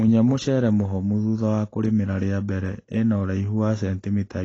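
From start to finish the speech sounds dull and smeared, with nothing above 8 kHz and a warbly, fizzy edge on sibilants. That's likely AAC compression, AAC-LC at a low bitrate around 24 kbps, where the encoder drops high bands and coarsely quantises what's left.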